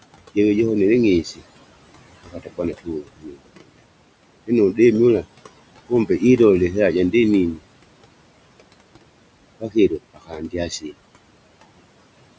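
From the start, noise suppressor artifacts run through the whole clip. The room noise sits about 16 dB below the speech. The suppressor pulls it down by about 21 dB in the pauses, then lets it swell back under each phrase. On a spectrogram the background floor looks patchy, with flickering specks between words instead of an even haze. In the waveform the quiet stretches dip and recover in step with the speech.

Speech cut by the noise suppressor occurs five times. The suppressor mistook soft parts of the speech for noise and turned them down with the background, so endings and quiet syllables sound swallowed or faint:

At 1.24–1.42 s, just after "jove johonele", parts of the speech drop by up to about 15 dB for around a tenth of a second.
At 2.25–2.59 s they drop by up to about 20 dB over roughly a third of a second.
At 2.79–3.82 s, the deepest cut, they fall by up to about 22 dB for about half a second in total.
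At 5.89–6.22 s, just before "ilole ihera", they drop by up to about 16 dB, briefly.
At 9.6–10.94 s they drop by up to about 20 dB over about half a second.

In the waveform these show as notched, hollowed-out envelopes. On the spectrogram the speech energy looks gouged away, fading into the cleaned floor.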